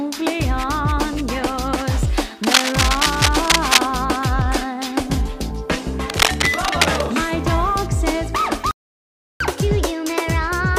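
A worn cable or connector was likely being moved, adding dense, uneven scratching and rustling about as loud as the audio itself from 2.43 to 3.79 s and again from 6.10 to 7.01 s. A playback stall follows, likely the player running out of data, so the sound cuts to silence at 8.71 s for 0.69 s before resuming at 9.40 s. The player then plays catch-up at higher speed, running its backlog at 1.25 times normal from 9.40 s to the end, with pitch raised by roughly four semitones.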